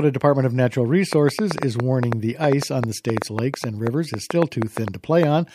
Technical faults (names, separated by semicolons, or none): train of clicks